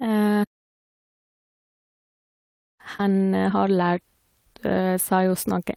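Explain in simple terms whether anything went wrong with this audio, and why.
Around 2.97 to 3.01 s there's a short concealed packet loss. About 20 ms of speech arrived too late, so the receiver stretched the previous sound over the gap, leaving a quick smear.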